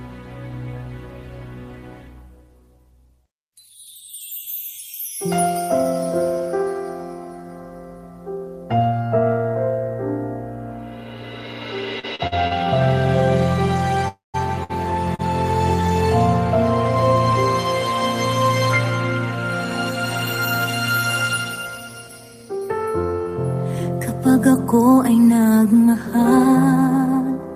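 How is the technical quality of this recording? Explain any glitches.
The recording has several network playback faults between about 12 and 15 s, and the end runs fast.

Repeated stalls (stutter), 11.99 to 12.65 s: packets arrived late again and again, so the jitter buffer kept running dry and the receiver extended the last sound four times, the longest gap 46 ms, 157 ms in all. About 29% of that span is filled-in sound. It drags and stutters. On a spectrogram, short smeared or repeated columns interrupt the normal texture.

Call audio freeze, 14.08 to 14.36 s: the sound holds as a fading buzz or hiss, then about 160 ms of silence, 254 ms added in total, before resuming where it stopped. The likely cause is delayed packets emptying the buffer. The waveform shows a decaying tail into a flat stretch.

Short stall from a late packet, at 14.64 to 14.71 s (57 ms) and 15.15 to 15.21 s (34 ms): each time a packet missed its slot, the receiver stretched the current sound until it arrived. 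A sound is held slightly too long, with a slight buzz or dip. A spectrogram shows brief horizontally smeared bands.

Jitter buffer speed-up, 24.53 to 27.29 s: excess buffered audio was trimmed by cutting many pitch-period-sized slices, roughly 0.3 s in total. The sound runs about 10% fast at unchanged pitch and feels hurried. Spectrogram events look compressed in time, without any frequency shift.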